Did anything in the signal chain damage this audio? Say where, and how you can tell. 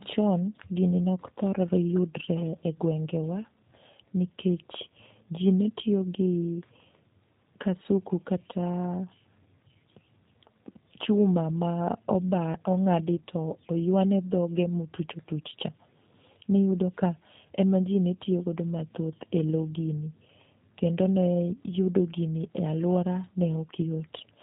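Yes, at the codec stage: a G.729 codec runs throughout. It rebuilds the speech from a vocal tract filter, a pitch predictor and a few pulses per frame, which fits 8 kbit/s. Nothing above 4 kHz survives, and the speech sounds plainly rough and synthetic.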